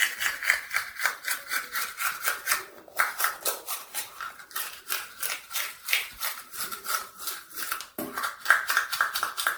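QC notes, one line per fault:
Throughout, generation loss: the audio appears to have gone through a lossy MP3 chain many times over, likely around ten decode and re-encode passes at a rate that points to 96 kbit/s. Each pass requantises the signal on a shifted frame grid, so the errors pile up instead of staying put. The result is a swirly, hollow, smeared texture with blurred attacks, worse than a single encode would leave, and nothing above about 19.9 kHz.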